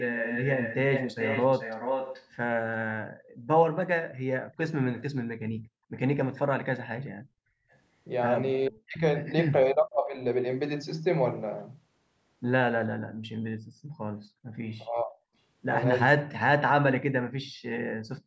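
From 0.00 to 2.28 s a second copy of the speech trails about 434 ms behind, nearly as loud as the original. This is an echo leak, likely from a far-end loudspeaker whose echo canceller let its own playback back into the call.

Between 4.42 and 7.71 s the room sound drops away in dips totalling about a second, at deepest about 40 dB. This is background gated by the echo canceller, which clamped the microphone while its loudspeaker played.

Inside that stretch, the same 434 ms echo leaks through faintly from 4.54 to 5.02 s, and again, barely audible, right as the stretch ends, from 7.71 to 7.75 s.

From 8.69 to 10.19 s the talker's speech sinks deeply in pieces adding up to about 0.7 s. This is speech suppressed in double talk, likely because the canceller confused both people talking at once with echo.

The background gating returns from 12.99 to 14.59 s, about a second of dips in total. 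The double-talk suppression returns from 14.88 s to the end, about a second of deep cuts.

Within that final stretch, the background is gated once more from 17.41 to 17.63 s. Throughout, the call's microphone processing limits the sound to 8 kHz.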